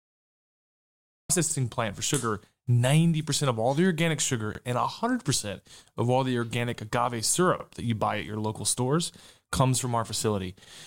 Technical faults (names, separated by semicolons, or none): cut-off start; overlapping chunks